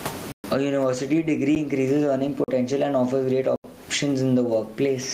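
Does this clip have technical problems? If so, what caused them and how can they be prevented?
Yes, two things stand out. Gain pumping runs through the whole clip: the level ducks by around 20 dB under loud sounds, so the level feels squashed. The likely cause is input gain set way too high, with a fast limiter or compressor clamping down on each loud syllable. Setting the mic gain properly and turning off or easing the automatic limiting should fix it.

There are also four blocks of digital silence, where the audio drops straight to silence and back with no fade. They come at 0.32 to 0.44 s (120 ms), 1.55 s (about 10 ms, just a tick), 2.44 to 2.48 s (40 ms) and 3.56 to 3.64 s (80 ms). That pattern points to the software missing its deadline to fill the output buffer. A larger buffer and less competing load on the machine should prevent it.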